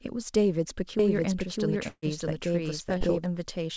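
From 0.99 s to 3.26 s a doubled audio track runs under the speech. A second full-band copy trails about 0.7 s behind, at roughly the same level. It has no decay or room colour. It cuts in and out abruptly. A second, slower capture path is the likely cause.

At 1.88 s a burst of packet loss hits. About 150 ms of speech is gone. The receiver stretches the last sound for about 144 ms and fades it out, leaving a brief silence. The speech then resumes at 2.05 s, further along, with the middle missing.

From 2.98 s to 3.04 s there is a short concealed packet loss. About 30 ms never arrived in time. The decoder patched roughly 22 ms by extending the preceding sound, then blended back. It comes across as a quick smear.

Throughout, the G.722 call path leaves nothing above 8 kHz.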